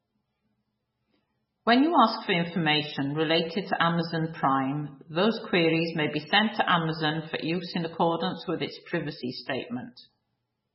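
MP3 compression is heard throughout, with heavy damage: the speech has nothing above 5.6 kHz and sounds watery and swirly. A starved encoder cut the treble at a fixed frequency and let weak lines flicker between frames, likely at a bitrate around 16 kbps.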